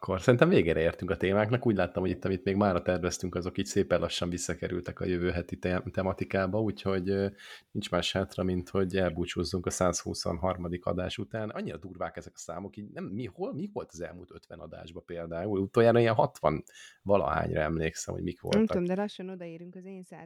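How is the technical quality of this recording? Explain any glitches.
The recording has two audible glitches, both zipper noise. From 15.2 to 15.73 s the speech level rises by around 15 dB, and from 18.59 to 19.45 s it drops by around 20 dB. Each time, the gain moves in unsmoothed steps roughly 150 times a second, and every jump leaves a tiny click, so a fine ticking buzz rides on the speech while the level moves.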